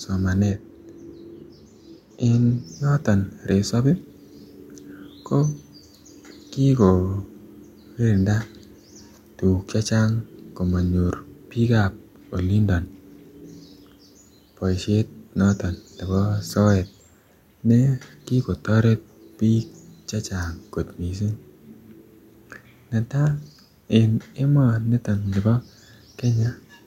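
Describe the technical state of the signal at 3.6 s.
At 3.6 s the speech signal is intact, with no technical fault at that moment.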